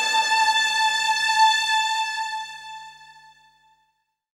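No technical faults can be heard anywhere in the audio, and the signal stays steady and intact throughout.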